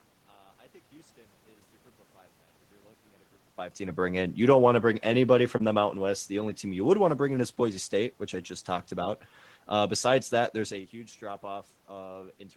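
From 0.00 to 3.58 s the speech sounds faint, about 22 dB quieter than normal. The likely cause is one channel inverted, so the shared centre cancels when the two channels are summed.

From 5.09 to 8.22 s the level sinks steadily by about 6 dB, background and all. This is automatic gain falling: the gain control judged the input too loud or its background noise too strong and eased its gain down.

Within that stretch, at 5.57 to 5.62 s, a brief smear or wobble marks a short concealed packet loss. About 20 ms of audio never arrived in time, so the receiver extended the preceding sound for 21 ms before blending back into the real signal.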